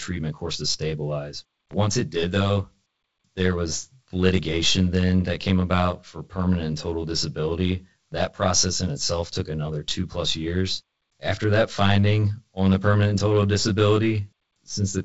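Channel delay (comb filtering) runs throughout: one channel trails the other by roughly 20 ms before they are summed to mono. Shared content cancels at evenly spaced frequencies from around 20 Hz upward, leaving the speech rough and slightly doubled.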